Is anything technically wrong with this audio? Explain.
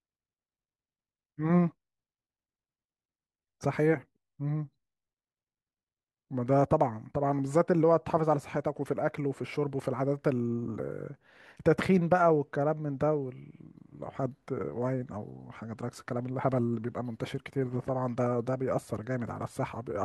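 No, nothing technically wrong is audible anywhere in this speech recording.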